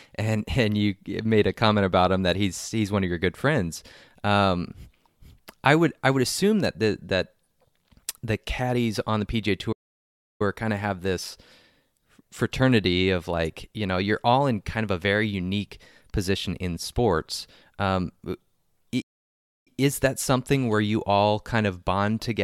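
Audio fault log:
9.72–10.42 s and 19.01–19.68 s, playback stall: the player likely ran short of buffered data or had its output thread blocked, so the speech stops mid-flow and falls silent for about 0.68 s and 0.65 s, picking up again at "kind of have this" and "is that something where".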